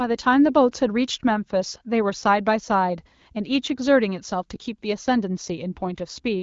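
No technical faults can be heard in this speech, which comes through an AMR wideband (HD Voice) codec path at 12.65 kbit/s.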